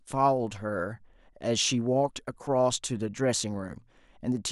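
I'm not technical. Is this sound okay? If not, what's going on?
Yes, the speech sounds fine, with no problems.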